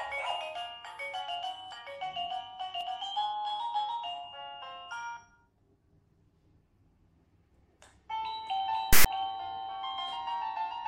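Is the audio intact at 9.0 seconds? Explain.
No. From 8.93 to 9.06 s, file tags are played as audio. A block of text tags is decoded as if it were samples. The text gives a loud, lopsided rasp. The zero padding drops to silence. Both start and stop with hard edges.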